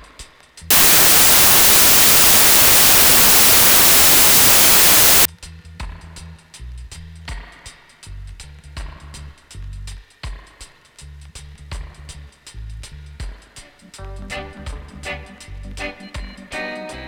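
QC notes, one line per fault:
0.71 to 5.25 s, wrong sample width. Harsh, loud noise takes over, with the original audio buried underneath. The sound also runs slow, at about two thirds of normal speed, so its pitch drops by the same ratio. This fits 24-bit samples being read as 16-bit ones. Bytes from neighbouring samples get combined into new values. Only some of those values keep the real signal's top bits. The rest turn into noise.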